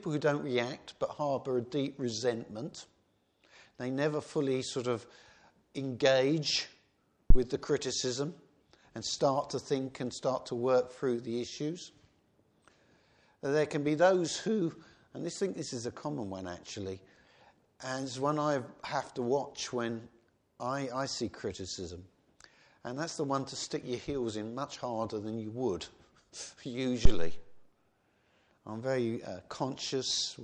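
Two phantom power thumps, at 7.30 s and 27.05 s, each peaking around -8 dBFS with a smooth decay: a supply switched on a live input, unlike the irregular rumble of handling noise.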